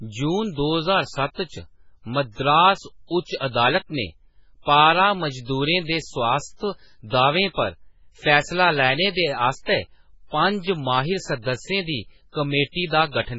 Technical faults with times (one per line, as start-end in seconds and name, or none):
0.00-13.38 MP3 compression
3.36-3.41 pre-echo